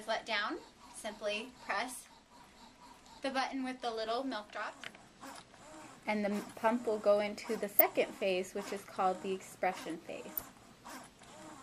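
From 10.35 to 10.42 s a brief burst of noise blips cuts across the sound, jumping in and out of separate frequency bands. This is DAB burbling: weak reception let bit errors, at a rate of a few tenths of a percent, slip past error correction into the MP2 audio data. Corrupted samples put blips of noise into individual sub-bands and corrupted scale factors throw sub-bands to the wrong level, and the 74 ms span fits about three damaged frames.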